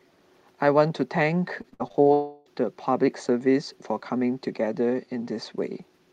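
Speech, with repeated packet loss (robotic sound) from 1.61 to 2.07 s: six gaps, the longest 58 ms, patched by extending prior sound, making 39% of that span choppy. From 2.13 to 2.48 s the audio is replaced by a continuation that fades as a buzz or hiss, lasting about 0.32 s with no silence, likely a long network dropout that the receiver concealed throughout.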